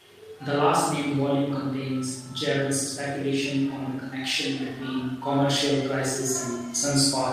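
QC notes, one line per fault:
No technical faults were heard in the signal on this pass.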